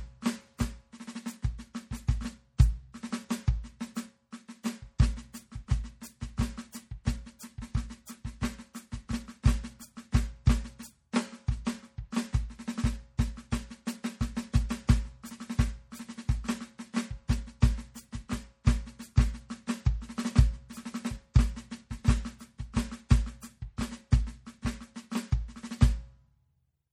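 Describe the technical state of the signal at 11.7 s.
At 11.65 s a pre-echo precedes a sharp attack: a brief hiss about 17 ms long sits just before the onset, which sounds soft and smeared. The codec spread its quantisation noise across the whole block, filling that quiet gap. On a waveform, low-level noise rises ahead of the transient. On a spectrogram, a faint broadband smear leads the onset's vertical edge.

Underneath, the music carries plainly audible MP3 compression throughout, likely from low-bitrate encoding, which fits around 48 kbps. It sounds watery and swirly, with metallic chirps on bright attacks. A spectrogram shows nothing above 19.2 kHz and speckled high-frequency detail as weak lines flicker on and off between frames.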